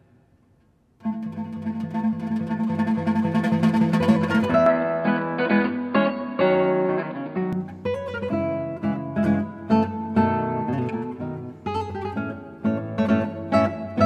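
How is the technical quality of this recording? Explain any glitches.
There's one clear glitch. From 4.66 to 7.53 s the sound goes dull and boxy, with nothing above 4.8 kHz, then opens up again. That points to the input likely switching to a poorer device with a narrower band. Level holds steady, there's no gap at either switch, and a faint new noise floor sits well below the signal.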